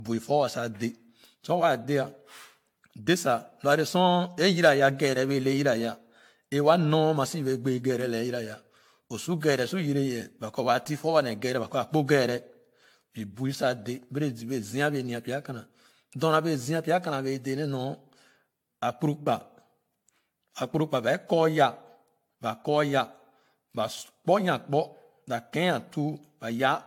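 Throughout the speech the sound is swirly, smeared and hollow, with blurred consonant attacks and nothing above about 18.7 kHz. That degree of smearing is more than a single moderate-rate encode would produce, and the likely cause is generation loss: the audio decoded and re-encoded around seven times with a lossy codec, consistent with AAC-LC near 96 kbit/s. Each pass quantised on a shifted frame grid, so noise accumulated.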